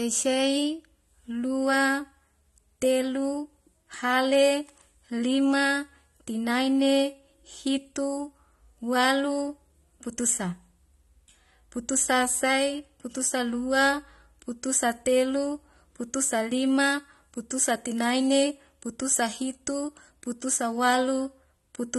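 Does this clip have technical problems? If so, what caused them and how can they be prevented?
Yes. Throughout, the speech was likely squeezed through AAC compression at a low rate, which fits roughly 32 kbps AAC-LC, so the encoder discarded fine spectral detail: nothing survives above 12 kHz, leaving the audio dull, with smeared, fizzy sibilants and a warbling texture. Encoding at a higher bitrate, or keeping an uncompressed master, prevents this.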